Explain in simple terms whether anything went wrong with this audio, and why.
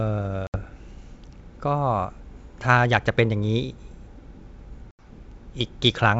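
Speech drops to silence at 0.47–0.59 s and 4.91–5.08 s, then returns slightly distorted: packet loss on an ADPCM call, briefly throwing the decoder out of step.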